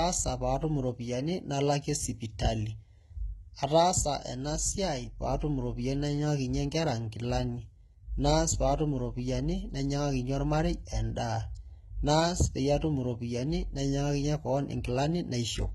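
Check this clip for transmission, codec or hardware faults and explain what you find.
One fault runs through the whole clip, from start to end: the speech carries HE-AAC compression damage, and it is heavy. Above a crossover the treble is bright but synthetic, with s sounds turning gritty and lispy and a metallic sheen over the upper range. The likely cause is spectral band replication, where the coder keeps only the lower band and rebuilds the top by copying it upward under a coarse envelope, which fits a very low bitrate around 16 kbps. On a spectrogram the upper region shows repeated, blocky copies of lower harmonic patterns that do not line up with those below, and nothing appears above 11.8 kHz.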